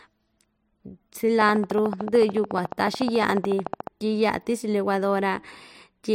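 From 1.42 s to 3.88 s a train of clicks ticks over the speech, pauses included: about forty similar pulses at a steady 13.8 per second, roughly 10 dB above the voice. Their even spacing separates this from random crackle. Interference from nearby equipment is the likely cause.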